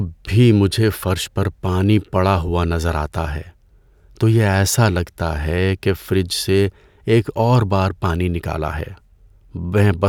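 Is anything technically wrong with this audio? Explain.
No, nothing technically wrong turns up anywhere in this speech recording, so there's nothing here to flag.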